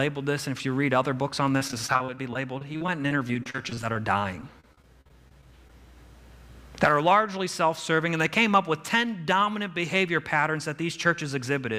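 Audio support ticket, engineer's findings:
Repeated packet loss (robotic sound), 1.57–5.70 s. Choppy sound with dozens of brief holes, the longest about 41 ms. Probable component: network path or jitter buffer. Late or lost packets are each patched by extending the preceding sound, which makes it robotic. Roughly 15% of the stretch is concealment, with pieces missing between patches.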